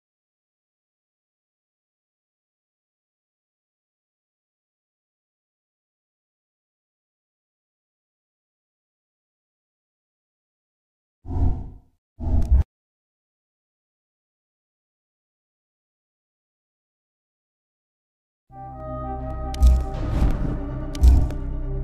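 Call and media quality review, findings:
Periodic USB or driver dropouts, 18.8–21.3 s: ticks every 0.5 s, each about a millisecond of silence, a background task blocking the bus or driver on a timer.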